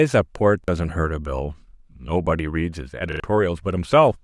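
At 0.64 s and again at 3.12 s the speech stutters from a repeated buffer: fresh audio arrived late, so the last block, consistent with a 40 ms buffer, replayed once, then twice, with hard joins, dropping about 40 and 70 ms respectively.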